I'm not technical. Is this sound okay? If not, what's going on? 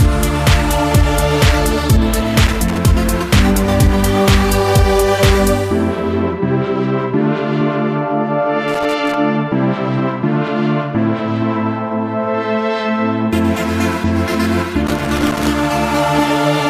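No. Three irregular bursts of scratchy crackle break into the sound, at 2.47 to 2.78 s, 8.68 to 9.14 s and 14.87 to 15.50 s. This is loose connector crackle: a worn or dirty plug contact keeps connecting and disconnecting as it moves, chopping the signal.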